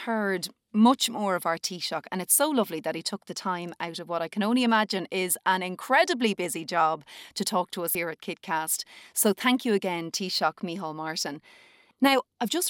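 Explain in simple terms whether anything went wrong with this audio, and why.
Damaged data in a compressed stream, at 7.92 to 7.95 seconds, in this speech recording. Part of the compressed file was corrupted there, so the decoder briefly misread it and lost its place before finding the next good chunk, giving a short blip.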